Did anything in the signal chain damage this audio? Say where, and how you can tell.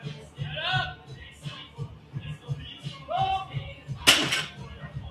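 Yes. Across the whole clip the level breathes unevenly, with sustained parts and decays sinking while sharp onsets stay up, so the sound pumps and thins, swinging by something like 10 dB. That points to the call-processing stage: a noise suppressor applied to music or sounds, tuned for speech, which reads steady tones, ambience and reverb tails as background noise and keeps pulling them down between transients.

In three places the sound is cut by the noise suppressor more deeply than elsewhere: from 0.22 to 0.39 s, from 0.98 to 1.14 s, and a longer stretch from 1.69 to 2.14 s. Each time the held or fading material drops by up to about 5 dB, while any attack at the start comes through. The suppressor judged these stretches noise-like and applied extra attenuation there.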